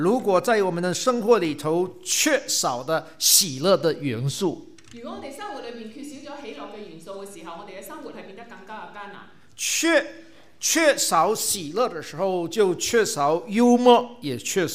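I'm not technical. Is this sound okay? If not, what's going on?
Yes, nothing in this recording points to a technical problem with how the sound was captured or delivered.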